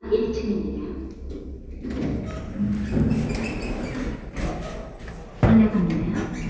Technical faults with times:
2.50-5.25 resampler restarted on every block

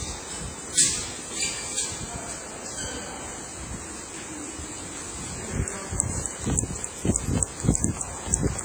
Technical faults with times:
0.00-8.64 WMA compression

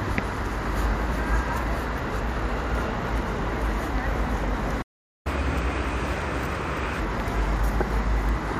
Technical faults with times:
4.81-5.27 playback stall
5.27-7.00 catch-up at higher speed

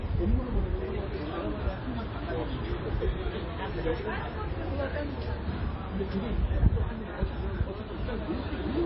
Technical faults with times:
0.00-8.85 MP3 compression

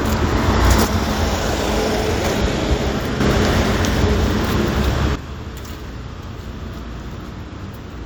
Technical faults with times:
0.85-3.20 sudden gain jump
5.15-8.06 sudden gain jump

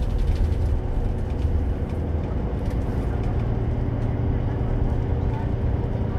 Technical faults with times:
none

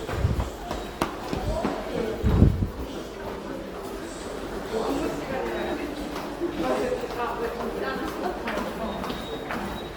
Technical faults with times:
0.00-9.97 Opus compression

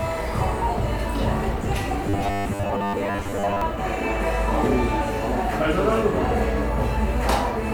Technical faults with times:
2.09-3.61 robotic sound from repeated short buffers

